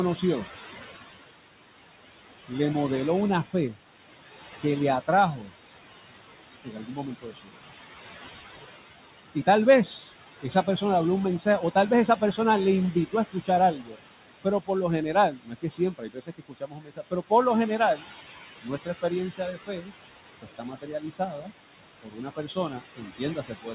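Noise suppressor artifacts run through the whole recording. The suppressor pulls the steady room noise down by about 16 dB, frame by frame. That noise sat only about 11 dB below the speech, so the processing works hard. The background drops away between phrases and swells back under the speech. On a spectrogram the noise floor breathes in blocks, with isolated speckles flickering in and out across the band, which ends at 4 kHz as the G.711-style call path leaves nothing above it.

Speech cut by the noise suppressor appears at 4.6–5.5 s, 6.64–7.64 s, 10.09–10.82 s, 11.39–12.38 s, and from 12.94 s to the end. The suppressor mistakes quieter stretches of speech for noise and turns them down with it, by about 10–19 dB at the deepest. The earlier spans lose short pieces, roughly 0.15 to 0.2 seconds each, and about half a second in the 6.64 s span. Those syllables and endings sound swallowed. 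In the waveform the envelope sags abruptly mid-phrase, and the spectrogram shows speech harmonics thinning or vanishing in patches.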